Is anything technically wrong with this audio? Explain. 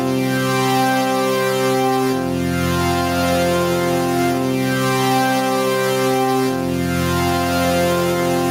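Yes. Gain pumping runs throughout the clip: the level of these sounds audibly ducks under each loud moment and climbs back afterward, a swing of roughly 5 dB. The likely cause is an input gain set far too high for the microphone, with a fast limiter or compressor clamping down whenever something loud arrives. The result is a squashed sound, with loud and soft parts pulled closer together in level.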